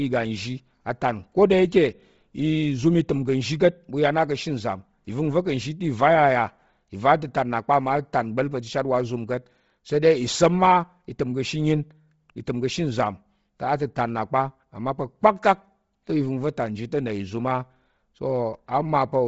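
From start to finish the speech has a breathy, grainy edge, with sibilants and upper detail turned to a hissy wash and nothing at all above 7.7 kHz. The damage is heavy and steady across the whole clip. The likely cause is Bluetooth LC3 compression at a low bitrate, which fits about 24 kbps with short 7.5 ms frames. The codec zeroes much of the upper spectrum and fills it back in with noise, and that grainy sheen rides on every sound.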